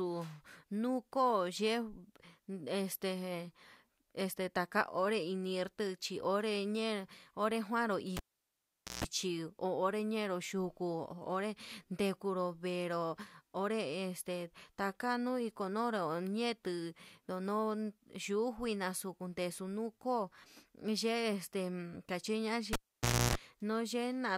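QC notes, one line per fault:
8.17 to 9.04 s, cable pulled and plugged in: a pop, then about 0.83 s of near silence while the lead is out, then a 0.15 s burst of 60 Hz mains buzz as the tip touches the jack before the sleeve grounds it, and another pop when the signal comes back.
22.73 to 23.35 s, cable pulled and plugged in again: same pattern, shorter dropout of about 0.57 s, but a longer buzz of 0.3 s while the plug is half-seated.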